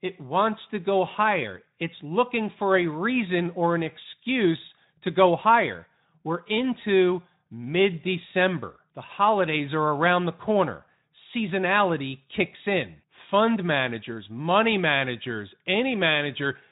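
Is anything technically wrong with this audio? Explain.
No, nothing here sounds technically wrong with this speech.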